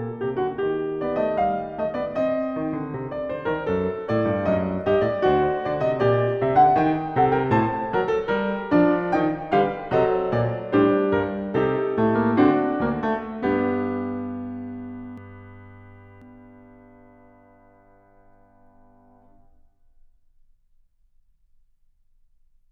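From 15.18 to 16.22 s the music carries a doubled audio track: a second full-band copy trails the original by roughly 400 ms at about the same level, so every attack is heard twice. It is likely caused by the signal being captured again over a slower path. On a spectrogram each onset appears as a twin vertical stripe about 0.4 s apart, with no decay or smearing. In the waveform the copy begins and ends as abrupt edges.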